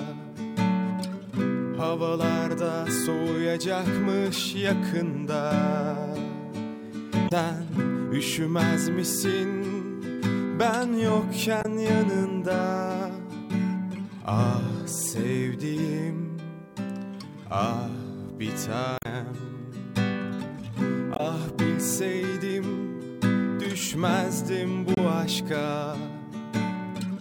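Brief glitches interrupt the audio at 7.25–7.32, 11.59–11.66, 18.95–19.06, 21.13–21.20 and 24.95–24.98 s, caused by damaged data in a compressed stream that throws the decoder out of frame sync.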